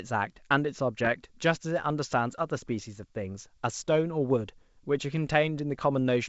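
Bit errors on an ADPCM link hit this speech clip at 0.99 to 1.09 s and again at 3.79 s. The flipped bits, at a sparse rate well under one percent, knock the decoder's step size and predictor off track, so each error rings briefly as a pop and rough burst with a momentary level change over the otherwise clear wideband G.722-style audio.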